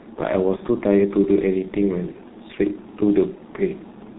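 G.723.1 codec damage runs through the whole speech clip. This narrowband telephony codec codes the voice in 30 ms frames at a very low rate, and the heavy coarseness points to roughly 6.3 kbit/s. Nothing above 4 kHz survives, so the voice is muffled and hoarse, and the slowly updated vocal model smears consonants into one another.

VoIP packet loss concealed by the speech codec strikes at 0.56 to 0.61 s and again at 2.12 to 2.17 s, each time dropping about 30 ms of audio. The decoder filled each gap by repeating its last pitch and filter settings at falling gain, so the sound briefly turns into a fading buzzy tone or coloured noise. Because every frame builds on the one before, the voice stays weakened just after each gap.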